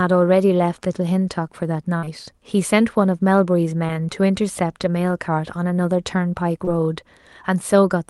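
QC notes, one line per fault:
1.97–2.05 s, burst of packet loss: about 60 ms of consecutive speech never arrived, so the decoder stretched the last sound, fading it down, before skipping ahead.
2.05–2.09 s, 3.87–3.91 s and 6.65–6.69 s, short concealed packet loss: roughly 20 ms went missing each time, and the patched-in continuation leaves a brief smear or wobble.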